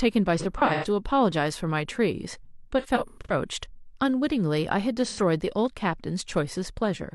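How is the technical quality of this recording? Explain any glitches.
The speech has three patches of AAC frame loss with concealment: 0.38–0.85 s, 2.79–3.33 s and 5.05–5.19 s. When frames drop, the decoder fills the gap by reusing the last good spectrum with scrambled phase. So instead of dropouts you hear smeared, noisy, phasey stretches. The first two are broken up, with runs of about a tenth of a second, pointing to five or six lost frames each. The last is a single 85 ms smudge.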